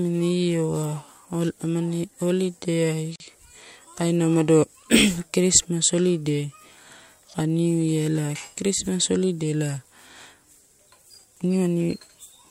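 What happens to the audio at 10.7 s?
At 10.7 s the speech continues intact, with no dropout, click, distortion or other fault.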